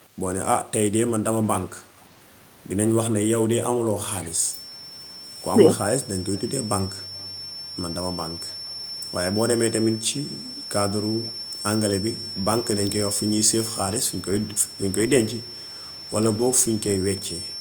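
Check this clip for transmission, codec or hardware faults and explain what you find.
Two faults are present in the speech: a feedback whistle and an echo leak.

From 4.25 s to the end, a thin 5.4 kHz feedback whistle that slowly swells and fades sits well below the speech, likely from a loudspeaker-to-microphone loop held just short of runaway.

At 6.35, 7.2 and 10.56 s, brief, faint echo-leak fragments repeat speech about 350 ms late, likely from residual loudspeaker pickup that the far end's echo canceller missed.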